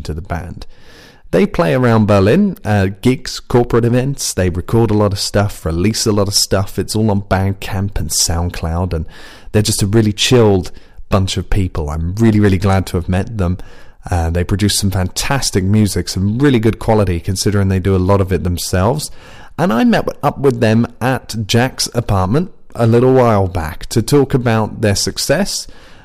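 A harsh, gritty fuzz rides the loudest moments of the speech from start to finish, with crackle on the stronger peaks. This is hard clipping: the level was driven about 9 dB past what a stage in the chain could pass, so every peak beyond that ceiling was sliced flat. Only a small share of the samples, around 2 percent, hit the limit, but those squared-off tops add high harmonics that give the peaks their edge.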